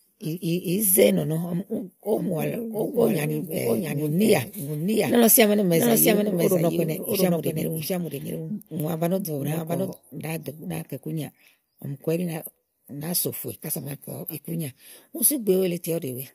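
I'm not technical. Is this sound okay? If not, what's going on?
No. From 2.17 to 9.93 s there is a doubled audio track: a second, somewhat quieter copy of the speech trails about 0.7 seconds behind, likely from the recording being picked up twice. Unlike a room echo, it never fades and switches on and off abruptly.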